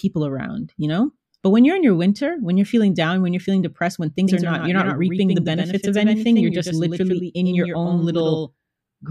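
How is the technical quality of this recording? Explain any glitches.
The recording has one glitch, a doubled audio track from 4.27 s to the end. A second capture path, or an edit holding two copies out of step, likely mixed the speech in twice. A full-band copy, roughly 5 dB quieter, trails about a tenth of a second behind with no reverberant tail. It starts abruptly, giving a hard, slapback-like doubling on every syllable.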